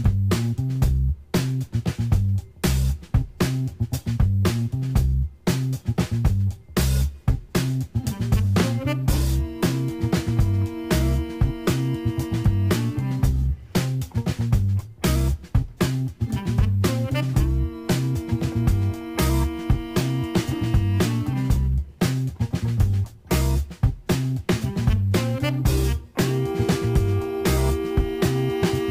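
Crude rate conversion runs through the whole clip: the sound was resampled by repeating the nearest sample, which fits a jump from 32 kHz to 44.1 kHz. The error lands roughly 25 dB below the signal as a gritty, inharmonic fizz trailing loud and high passages.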